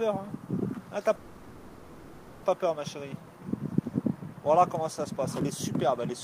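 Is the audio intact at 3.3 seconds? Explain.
Yes, the audio at 3.3 seconds plays through intact, with no dropout, click, distortion or other fault at that moment.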